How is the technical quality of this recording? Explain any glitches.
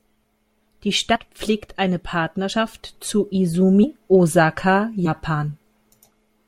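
The recording has four short dropouts where compressed frames were skipped, at 1.15–1.19 s, 2.52 s, 3.83–3.86 s and 5.05–5.10 s. At each one the speech jumps ahead, losing roughly 70 ms, or about 150 ms at 3.83 s. The losses are whole multiples of a 10 ms frame, consistent with damaged or missing frames being dropped.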